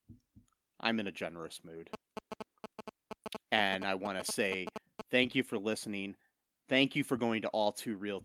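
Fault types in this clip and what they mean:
GSM signalling bursts: A nearby 2G phone sending short radio bursts gets rectified by the audio circuit. From 1.94 to 5.01 s, a galloping train of brief 217 Hz buzzes sits under the speech. It is only slightly quieter than the speech.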